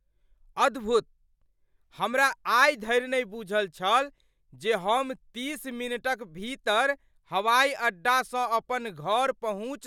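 A recording of speech with no audible technical faults anywhere in the signal.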